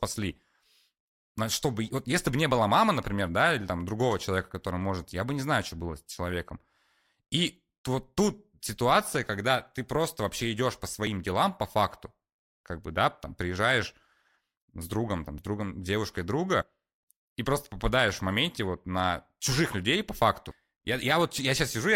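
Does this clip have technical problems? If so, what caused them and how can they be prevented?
Yes. Small skips in the speech at 8.66, 11.07, 15.38 and 16.62 s, each losing about 20 ms (the last nearer 70 ms), are likely dropped buffers (overrun). Unread input was overwritten and the two sides were joined directly, so there is no silent gap as in a dropout. Larger input buffers or a higher-priority capture thread would prevent it.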